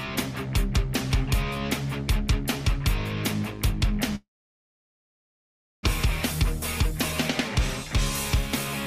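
From 4.15 to 5.87 s the sound fades into silence, likely from a long network dropout; about 1 s of audio never returns.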